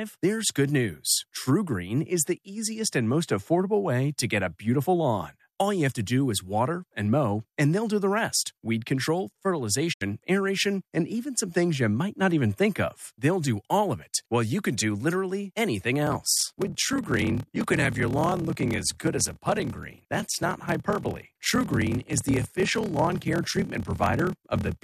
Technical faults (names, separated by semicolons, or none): digital broadcast dropout; block size mismatch (padded)